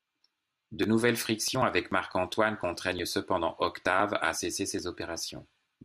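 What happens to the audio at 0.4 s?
Nothing goes wrong at 0.4 s: the speech there plays through intact, with no dropout, click or distortion to be heard.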